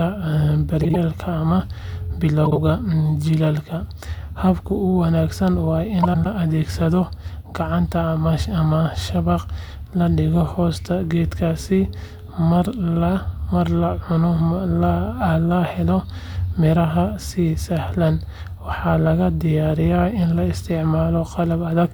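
Frames out of order occur three times in this speech: 0.83–0.96 s, 2.45–2.58 s, and 6.03–6.26 s, just after "wanaagsan waa". In each, two adjacent runs of frames were decoded in swapped order, so the stretch plays back with its halves exchanged. The first two swap blocks of about 52 ms, which fits pairs of roughly 26 ms frames; the third swaps 104.5 ms blocks. Each sounds like a brief garbled flutter. No time is lost.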